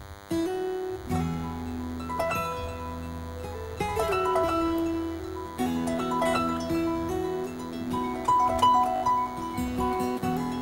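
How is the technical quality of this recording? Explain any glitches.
Two faults affect the recording: a constant buzz and one brief stutter.

A DECT cordless phone buzz runs throughout. A nearby handset or base station sends a radio burst every 10 ms. The audio circuit rectifies it. The result is a thin, steady 100 Hz buzz with many harmonics, roughly 20 dB below the sound.

A repeated buffer occurs from 8.96 to 9.02 s. New audio arrived late, so the device replayed its last 20 ms block three extra times. Each repeat joins hard to the next. The effect is a short buzzy stutter, with little or no audio lost.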